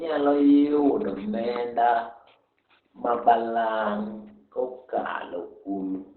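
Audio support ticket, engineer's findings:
Muffled, hoarse speech throughout, no content above 4.2 kHz, heavy codec damage. Likely Opus compression in SILK speech mode at narrowband: a starved encoder drops high bands and models the voice coarsely, consistent with a bitrate near 12 kbps.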